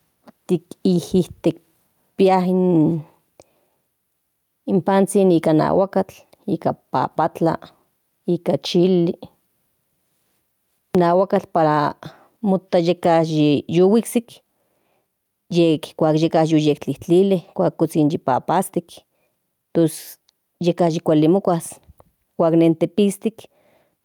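Throughout the speech, the level is pulled down each time a loud sound arrives, a gain swing of around 10 dB that brings loud and soft parts closer together and leaves the level squashed. This is gain pumping, likely from input gain set far too high with a fast limiter clamping each peak.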